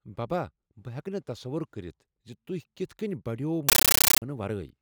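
From 3.69 to 4.22 s, a compressed stream played as audio: undecoded AC-3 data becomes loud static that chatters at a steady 31 Hz, unlike random noise.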